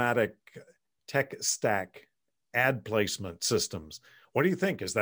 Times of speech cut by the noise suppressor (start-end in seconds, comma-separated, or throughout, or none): none